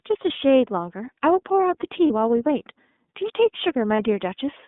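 The whole clip carries the sound of the iLBC codec. The speech is confined to a telephone band of roughly 200 Hz to 3.6 kHz, with nothing above, and has a plainly audible rough, slightly synthetic edge. Its 30 ms framing and 13.33 kbps rate point to iLBC's lower mode. Unlike a generic low-pass or narrowband channel, the roughness comes from coding each frame's excitation on its own, not from filtering alone.

Lost iLBC frames interrupt the speech at 0.33 s, 2.07 s and 3.95 s, each gap lasting about 30 ms, which fits a single lost frame. The decoder fills each hole by repeating the last pitch cycle blended with noise, so instead of silence you hear a brief held, faintly buzzy vowel. What separates this from the smeared recovery of codecs that depend on earlier frames is how cleanly the voice snaps back right after each gap.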